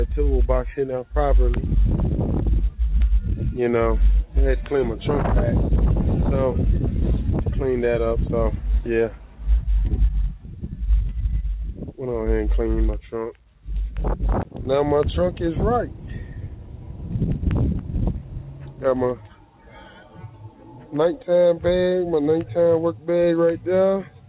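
Nothing goes wrong anywhere in this audio; it simply has the narrow, telephone-like band you'd expect from a G.711 A-law call at 64 kbps, with nothing above 4 kHz.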